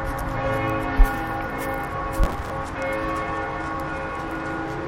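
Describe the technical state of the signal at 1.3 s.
At 1.3 s the audio is intact, with no dropout, click, distortion or other fault to be heard.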